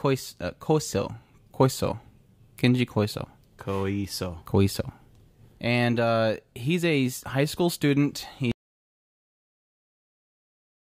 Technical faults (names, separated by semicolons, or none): audio dropout to silence